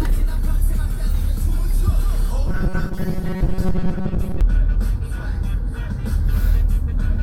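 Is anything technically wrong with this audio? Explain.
Yes. From 2.47 to 4.41 s there is robotic sound from repeated short buffers: a rigid 188 Hz buzz, likely from about 5.3 ms chunks replayed while most of the real audio is skipped. Unlike dropouts, the sound never goes silent.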